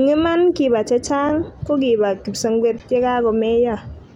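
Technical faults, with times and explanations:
1.29 s and 2.79 s, underrun with held sample: the output buffer ran dry twice and the converter held its last value until data arrived, freezing the waveform at a fixed level for about 6 ms, then about 12 ms, lengths that fit a 256-sample and a 512-sample buffer. The speech stalls as a brief flat step rather than a hard click. Playback resumed where it stopped with essentially no audio lost, so each gap closes with only a soft edge.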